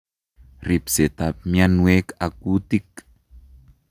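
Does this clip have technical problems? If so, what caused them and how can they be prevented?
No, there are no technical problems to hear in this speech clip. There is nothing to trace back to a cause or to prevent.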